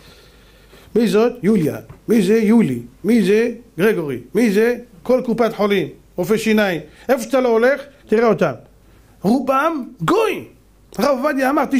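From 0.13 s to 11.71 s, faint regular ticks recur about every 0.2 s: clock slip clicks, likely one-sample drops or repeats between unsynchronised clocks roughly 100 ppm apart, showing as thin vertical spectrogram lines.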